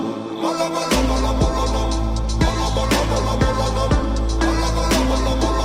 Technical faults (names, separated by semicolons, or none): none